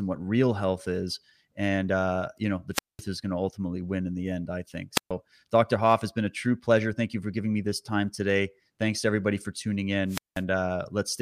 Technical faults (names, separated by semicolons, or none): wireless microphone squelch dropout